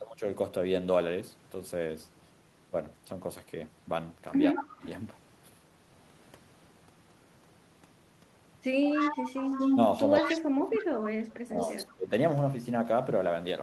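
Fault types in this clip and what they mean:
Speech suppressed in double talk: The talker's level sinks twice while both sides seem to speak at once. Near 4.5 s it dips by about 15 dB for about a third of a second. From 10.21 to 12.12 s it falls further, by about 30 dB, for roughly one and a half seconds. The likely cause is an echo canceller that could not tell local speech from loudspeaker echo and turned both down.
Echo leak: A delayed copy of the speech returns about 167 ms behind the original. It comes in six scraps, between 4.55 and 11.93 s. The longest runs from 8.84 to 9.78 s at roughly the same level as the speech. Others sit about 5 to 25 dB lower and sound brief. This is likely loudspeaker sound on one side that its echo canceller did not fully remove, so it was sent back.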